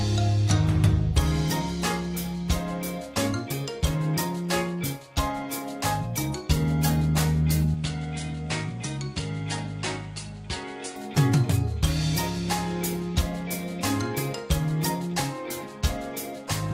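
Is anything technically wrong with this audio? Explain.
Yes. From 7.74 to 10.96 s the audio sounds like the input switched to a poorer device, likely a different microphone. With no gap at the switch, the sound turns duller as everything above 10.5 kHz vanishes, level drops by roughly 5 dB, and a new noise floor appears about 30 dB down. A spectrogram shows a flat ceiling at 10.5 kHz over that span, and the waveform shrinks.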